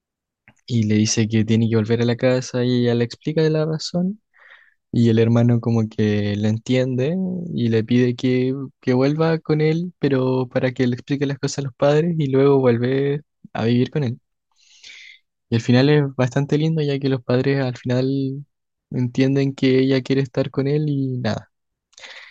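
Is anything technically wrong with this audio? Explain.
Yes. At 9.84 s there is a single sharp click in the speech, and the likely cause is dropped samples. A handful of samples, well under a millisecond's worth, are missing from the stream, so the waveform jumps straight from one value to a later one instead of moving smoothly between them. That step is far too brief to remove any audible sound, but the discontinuity itself produces the click and shows as a thin vertical line across the spectrum.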